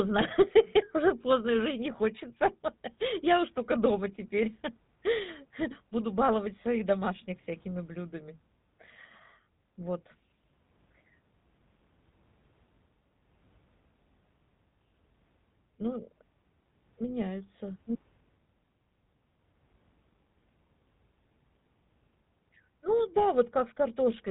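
Throughout the speech, the GSM full-rate codec is plainly audible. Nothing survives above about 3.8 kHz, so the sound is muffled and boxed in. The codec models the vocal tract as a filter. It then excites that filter with a regular pulse train rebuilt from a thinned-out residual. The result is a buzzy, gravelly roughness on the voice. This fits a 13 kbps full-rate stream.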